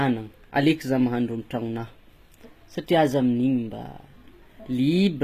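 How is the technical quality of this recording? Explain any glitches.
The recording is compromised throughout by what is likely HE-AAC compression, and the damage is plainly audible from start to finish. The audio has nothing above about 14.9 kHz. The upper band sounds synthetic rather than captured. At the low bitrates the artefacts point to, around 20 kbps, the coder keeps only the lower spectrum and fills the treble by copying lower bands upward under a coarse envelope. The rebuilt highs do not line up harmonically with the real content, so s sounds come out gritty, lispy and metallic.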